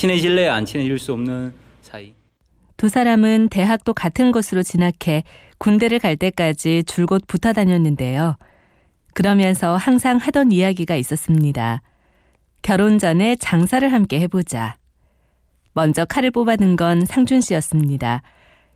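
No technical faults can be heard anywhere in this speech recording. Nothing interrupts or disturbs the audio at any point.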